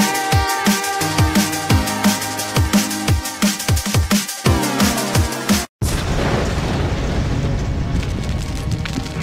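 From 7.04 s to the end, a 25 Hz buzz shows the resampler restarted on every 40 ms block; unlike hum, it needs signal present.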